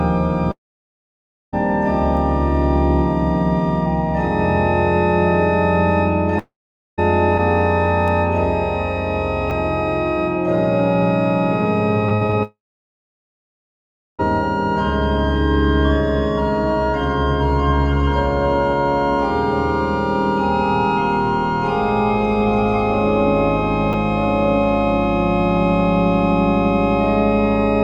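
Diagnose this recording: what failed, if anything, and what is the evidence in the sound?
Between 0.51 and 1.55 s, 6.39 and 7.0 s, and 12.43 and 14.21 s the sound briefly smears into a fading buzz, then falls to near silence before resuming further on. This is likely a long network dropout, with roughly 1.0 s, 0.6 s and 1.8 s of audio never played.

Single sharp, broadband ticks that have nothing to do with the surrounding sound occur at 2.17 s and 8.08 s. Each is a bit error spike: a flipped bit in storage or on a digital link made one sample jump at 2.17 s, and two adjacent samples jump at 8.08 s, before snapping back.

At 9.50 s and 23.93 s there is a tiny hard click, almost a buzz. Each is a repeated buffer in the driver or buffer stage: a 10 ms block was played twice because fresh data arrived late, leaving a hard join at the repeat.

From 12.09 to 12.35 s, just before the third dropout, the sound turns choppy and robotic. 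This is repeated packet loss on the network: four holes, the longest 60 ms, were patched by extending the previous sound, so nearly half that stretch is concealment.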